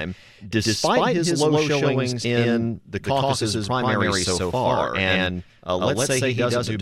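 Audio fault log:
Throughout, doubled audio track: a copy of the speech at about the same level trails roughly 150 ms behind, dry with no decay, likely from a slower second capture path.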